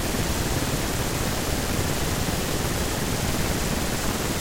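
From start to finish the speech carries a steady buzz at 188 Hz and runs about 1.88 times too fast while keeping roughly its normal timbre. This is a block size mismatch (truncated): each longer block is cut to what fits a 256-sample read, discarding its tail.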